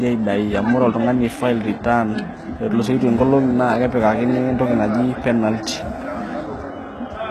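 From start to finish the speech has a plainly audible coded sound, likely HE-AAC compression at a low rate, which fits a bitrate around 16 kbps. The treble above the core band isn't the real thing but copied up from lower frequencies and shaped only roughly, so the s sounds come out gritty and a bit lispy, with a metallic edge where the harmonics don't line up. Nothing survives above about 12.4 kHz.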